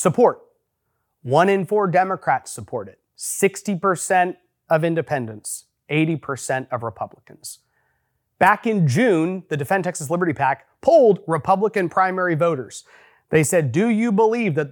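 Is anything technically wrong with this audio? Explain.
No, the speech signal carries no audible technical faults from beginning to end.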